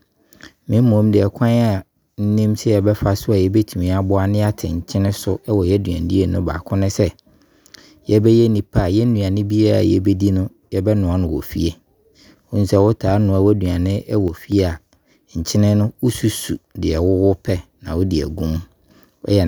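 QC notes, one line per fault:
14.28–14.52 s, sudden gain jump: sound and noise floor drop about 5 dB at once after "wɔtaa noa w'aduane", likely from an unramped gain change. The waveform envelope steps down and the spectrogram dims evenly across all bands.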